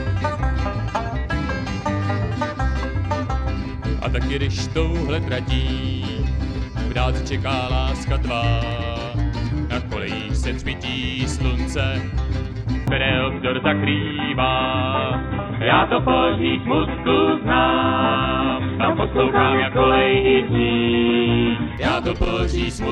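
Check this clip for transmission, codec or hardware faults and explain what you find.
One fault stands out. An input switched to a poorer device, from 12.9 s to 21.8 s, is the likely cause of the change in sound. Recording apparently moved to a narrower-band capture path, so nothing above 3.8 kHz survives, and a faint new background noise sits far below the signal. The switch is seamless, with no gap and no real level jump, yet the sound abruptly turns dull and boxy, then clears again at 21.8 s.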